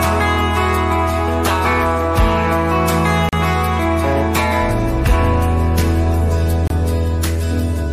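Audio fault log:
3.29–3.33 s and 6.67–6.70 s, Bluetooth stall: the sound drops to dead silence for about 39 ms, then about 28 ms, before continuing. On the waveform each gap is a flat line with abrupt edges. On the spectrogram it is a clean vertical blank band across all frequencies. The likely cause is radio interference delaying packets until the headphones' buffer ran empty, halting playback until retransmitted data arrived.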